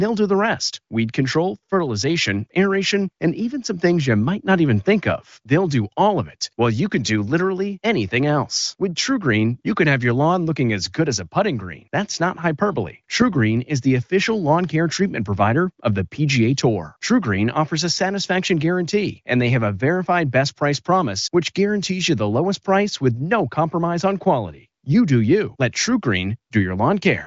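The speech comes through an AMR wideband (HD Voice) codec with no technical faults, its band stopping at about 7.5 kHz and its clarity fitting one of the higher AMR-WB rates, around 23 kbit/s.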